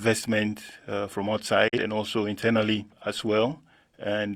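At 1.68 s, just after "uh from", the speech fades out over about 8 ms and stays silent until 1.78 s, returning at "and also internally as". This digital broadcast dropout happened because the receiver muted while it lacked good data. The roughly 43 ms of audio lost fits a single missing frame.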